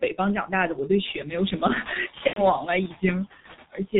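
Right from the start the whole clip has G.723.1 codec damage, and it's heavy. Everything above 4 kHz is gone, so the speech comes across muffled and a bit hoarse, and the consonants smear into each other. That's a coder working in chunky 30 ms frames with a voice model that only updates slowly, and the thinness points to the 6.3 kbit/s mode. It can't keep up with fast articulation, so detail just gets averaged away.

Noise suppressor artifacts sit on top of that for the full length too. The suppressor is pulling about 12 dB off whatever bands it decides are steady noise, frame by frame, so the background dips in the gaps and swells back up underneath the speech. The room noise itself is genuine and comes up around a second in.

Then from 2.27 to 2.48 s there's VoIP packet loss concealed by the speech codec. The decoder lost its input and kept going on its last pitch and filter settings, turning the gain down each frame. 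You hear the sound stretch out and fade, and by the third missing frame it's muted. The gap fits roughly three 30 ms frames going missing, and because each frame leans on the one before, the speech stays weak and distorted a little past where the packets come back.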